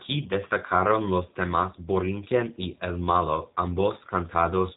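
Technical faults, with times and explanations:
throughout, G.729 codec: The speech sounds narrow, slightly rough and synthetic, with plainly audible codec damage and nothing above 3.8 kHz. The coder doesn't send the waveform itself. It models each short frame as a vocal tract filter, a pitch predictor and a few pulses, and the decoder rebuilds the speech from those. The rebuilt excitation lacks the fine detail of the original, which gives the grainy edge. The bandwidth and coarseness fit an 8 kbit/s stream.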